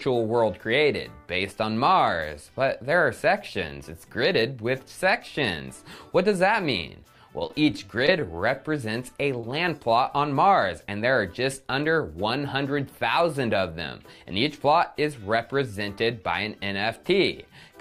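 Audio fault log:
7.39–8.27 s, repeated packet loss (robotic sound): audio data kept arriving late or not at all, leaving six short holes, the longest 27 ms. The decoder patched each by extending the preceding sound, so roughly an eighth of this stretch is synthetic, giving a choppy texture with fragments missing.
9.41–9.45 s, short concealed packet loss: a single brief piece of audio, about 20 ms, failed to reach the decoder in time. The receiver bridged it by continuing the previous sound, then blended back into the real signal, leaving a momentary smear or wobble.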